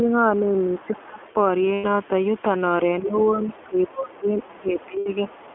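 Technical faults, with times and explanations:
throughout: iLBC codec. The sound is confined to roughly 250 Hz to 3.4 kHz, and each 20 ms frame's excitation is coded independently at a rate that fits the 15.2 kbps mode. This gives plainly audible roughness and a slightly synthetic edge to the speech.
0.0–0.1 s, 0.41–1.23 s, 3.0–5.29 s: speech suppressed in double talk. The talker's level sags, only a few decibels at the very start but dropping by around 20 dB in the two later stretches. This is likely because the echo canceller turned everything down while both sides spoke at once.
0.73–1.33 s, 3.15–4.46 s, 4.78–4.86 s, 5.29–5.54 s: other side's voice leaking through. A second voice sits under the talker. It is faint in the first, third and last spans, but much stronger from 3.15 to 4.46 s, only about 10 dB below the speech. It is likely loudspeaker echo the canceller failed to remove.
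1.74–1.86 s, 4.98–5.08 s: lost iLBC frames. Gaps of 100 ms and 80 ms, which fit five and four missing 20 ms frames, are filled by the decoder repeating the last pitch cycle with added noise. They sound like a briefly held, breathy vowel, and the speech recovers almost at once afterwards because each frame decodes independently.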